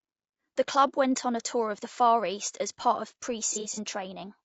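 The speech in this clip has likely passed through low-delay AAC compression throughout, the AAC-ELD type used for video calls. Its short frames resolve pitch harmonics poorly, and the plainly audible damage, with a rough, grainy voice, noise between harmonics and a synthetic-sounding top band, fits a low bitrate of around 32 kbps. From 3.53 to 3.79 s there is AAC frame loss with concealment. About 120 ms of audio went missing, scattered over 240 ms, with the longest gap roughly 70 ms, and the decoder patched it from the last good spectrum, leaving a smeared, noisy, phasey stretch.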